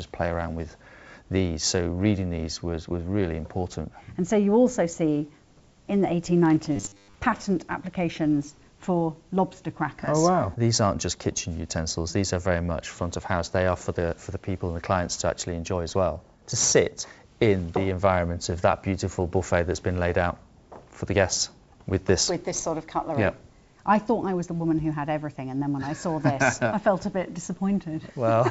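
From 6.76 to 7.14 s the audio turns into a rigid metallic buzz at 100 Hz, the robotic sound from repeated short buffers. It is likely caused by late-arriving audio being filled by looping a 10 ms slice across most of that stretch. A spectrogram shows evenly spaced horizontal harmonics at multiples of 100 Hz, and the waveform shows identical 10 ms cycles. The clip passed through a WebRTC call path whose character fits G.722, with nothing above 8 kHz.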